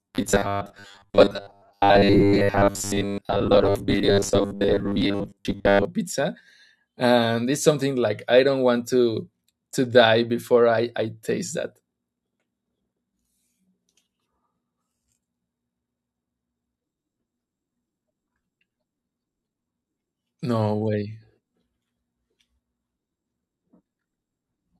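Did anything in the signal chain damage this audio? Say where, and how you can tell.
Yes. Between 0.01 and 5.85 s the speech is a rigid, metallic buzz at a fixed 100 Hz that only loosely tracks the words: robotic sound from repeated short buffers. The likely cause is at the driver or buffer stage. New audio arrived too seldom, so a 10 ms block was replayed for roughly 70% of that stretch while the real signal was skipped. The repeats impose a buzz at the block rate.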